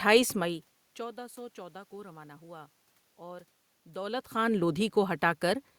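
No technical faults can be heard in the signal; the room noise and the changes in level around half a second in and again near four seconds, where the talker moves relative to the microphone, belong to the recording itself rather than to the system.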